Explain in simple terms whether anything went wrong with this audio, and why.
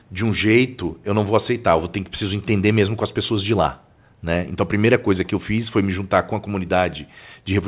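Nothing went wrong with this speech recording. It came through a call connection, and the only trace of that is the familiar phone-call sound, with nothing above about 4 kHz, which fits an ordinary telephone-grade codec doing its normal job.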